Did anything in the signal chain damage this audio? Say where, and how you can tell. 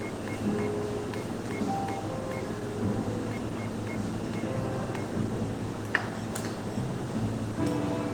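Yes, at the codec stage, throughout. The sound is rough and grainy with a hoarse, muffled quality, yet content reaches about 20.1 kHz, so bandwidth isn't narrowed. This likely comes from Opus compression in hybrid mode at a low rate around 16 kbps, with band filling replacing detail with noise.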